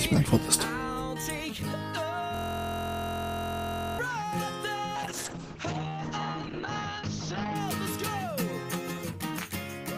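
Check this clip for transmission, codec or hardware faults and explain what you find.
Two faults are audible: a hardware-level hang loop and a later drop in call bitrate.

System hang loop, 2.35 to 3.99 s: the system stalled while the audio device kept replaying its ring buffer. A 23.22 ms slice repeats around seventy times, giving a steady 43.1 Hz buzz, which fits a 1024-sample buffer.

Call bitrate drop, 4.96 to 7.61 s: the encoder was pushed to far fewer bits, which points to a fall from about 48 kbps to 8 kbps. The bandwidth narrows from 20 kHz to 8 kHz, leaving the sound muffled and rough for about 2.6 s.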